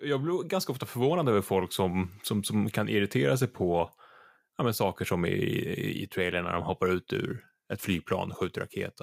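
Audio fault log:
7.15 to 9.03 s: crude rate conversion. Samples are simply repeated, not filtered, which fits a jump from 44.1 kHz to 48 kHz. The stepped error makes unrelated tones. It sits roughly 25 dB below the speech and rides its louder, brighter parts as gritty fizz.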